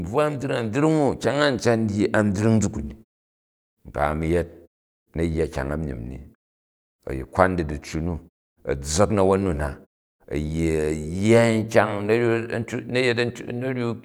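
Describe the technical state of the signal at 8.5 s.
At 8.5 s the speech signal is intact, with no dropout, distortion or other fault, and the muting of the background in pauses works as intended.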